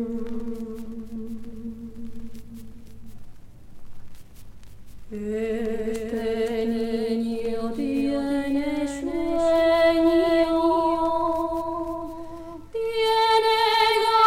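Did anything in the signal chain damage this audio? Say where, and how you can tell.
Yes, there's a doubled audio track running the whole way through: a clean, full-band copy trails the original by about half a second, roughly 5 dB down, with no decay or room colour. That's likely a second, slower capture path or an edit holding two copies out of step.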